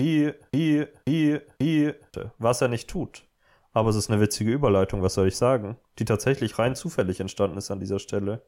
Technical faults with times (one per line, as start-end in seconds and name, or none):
0.00-2.14 broken-record loop